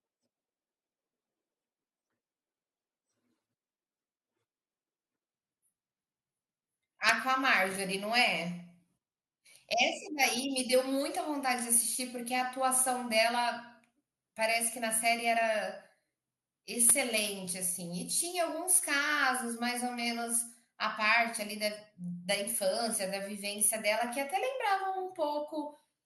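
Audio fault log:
0.00–5.35 s, section at the wrong speed: the opening speech plays 1.84 times too fast, sounding hurried and raised by roughly ten semitones, likely from being clocked at the wrong rate. Unlike a plain pitch shift, tempo and pitch rise together, then drop back abruptly at 5.35 s.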